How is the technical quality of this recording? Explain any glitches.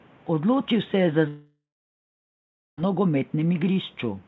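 The recording has one serious glitch: a long gap where part of the speech is simply missing. The call path audibly stops at 8 kHz, which fits a wideband codec such as G.722, and faint room noise sits about 34 dB below the speech.

Long network dropout, 1.28 to 2.79 s, right after "se je za": audio packets most likely stopped arriving for about 1.5 s. The receiver stretched the last sound into a fading buzz before settling into silence for roughly 1.1 s. When the speech resumes, the lost section is gone rather than delayed.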